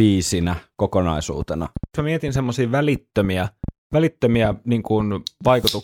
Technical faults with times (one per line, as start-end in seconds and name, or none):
1.42-5.65 train of clicks